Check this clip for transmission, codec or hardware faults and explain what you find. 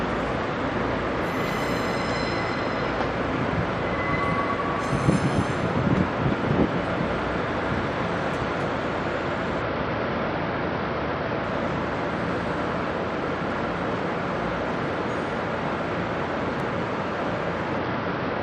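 Two kinds of fault turn up: a Bluetooth SBC bit pool drop that happens twice, and a single loud pop near the end.

The SBC bit pool drop hits from 9.62 to 11.44 s and again from 17.78 s to the end. The treble goes dull and a gritty noise creeps in, which fits the link shrinking the bit pool from 31 to 10, around 77 kbps, so the top sub-bands starve and everything else gets coarsely quantised.

The loud pop lands at 16.60 to 16.62 s, a sharp click a few dB above the surrounding sound, with the audio carrying on underneath. It's likely from a voltage step or pulse, such as a switch, static or a driver glitch, getting into the signal path.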